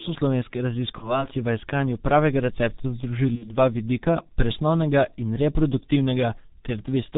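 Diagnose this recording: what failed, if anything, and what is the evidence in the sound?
Codec stage: the whole clip of speech carries G.723.1 coding at 6.3 kbit/s, with heavy damage. Nothing survives above 4 kHz, so the speech is muffled and hoarse and consonants smear, because the coder's coarse 30 ms frames refresh its voice model slowly.

Network stage: VoIP packet loss concealed by the speech codec occurs at 0.98–1.27 s, just before "v iskanju pravega recepta", and at 3.35–3.56 s, right after it. The decoder extrapolates its last pitch and filter into a buzzy tone or coloured noise that fades. About 30 ms and 60 ms are missing, which points to one and two lost frames. The disturbance persists after each gap while the frame-to-frame state recovers.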